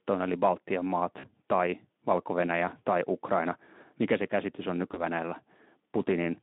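A speech clip with two short dropouts covered by VoIP packet loss concealment, at 1.19 to 1.27 s and 4.91 to 5.04 s. The Speex decoder stretches its last frame into a buzzy tone or coloured noise that fades, roughly 40 ms then 20 ms of lost audio, with the narrowband line's damage staying light.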